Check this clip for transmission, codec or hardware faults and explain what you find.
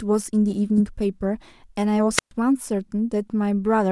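One fault appears, a wireless microphone squelch dropout from 2.16 to 2.31 s. The analogue FM link fades, hiss rises briefly, then the receiver's squelch mutes the speech for about 124 ms before it returns. That rising hiss sets it apart from a digital packet loss, which cuts out abruptly.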